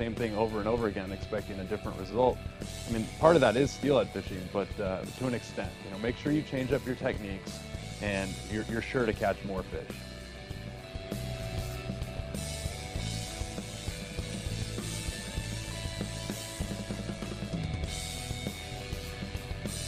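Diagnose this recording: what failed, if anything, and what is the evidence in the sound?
Overlap-add ripple runs through the entire recording, from start to finish, and points to a frame-based processing stage, such as call processing or a codec's resynthesis step. The level swings by about 6 dB at a rate of around 100 Hz, heard as a metallic buzz with extra tones around each note over all the sound. The audio was split into windowed frames and rejoined with an overlap whose windows don't sum to a constant gain, so the level dips and rises once per frame.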